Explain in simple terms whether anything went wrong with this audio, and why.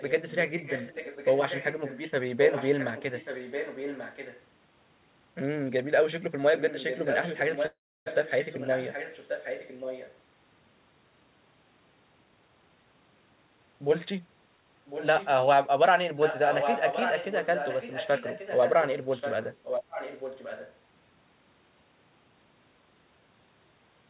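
Yes, three things went wrong.

Echo leak: On the other end of the call the sound was most likely coming out of a loudspeaker, and the echo canceller there did not remove all of it before sending it back. You hear a second copy of the speech trailing about 1.1 seconds behind, at 0.0–0.12, 0.58–2.01, 2.44–4.43, 6.55–10.17, 14.87–15.28 and 16.18–20.76 s. The echo is faint at first and strongest in the last stretch.

Call audio freeze: From 7.66 to 8.08 s, network packets were likely delayed and the receiver ran out of audio to play. It stretched the last sound for a moment, then went quiet for about 0.3 s until the packets arrived. The speech then carries on where it stopped, so nothing is lost, but a 0.4-second hole has been added.

Jitter buffer speed-up: The receiver had built up too much waiting audio, so from 12.23 to 14.58 s it caught up by cutting many tiny slices out of the sound, around 0.4 s in total. 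Because of this, that stretch plays about 17 percent faster. The pitch stays the same, so it sounds hurried rather than higher.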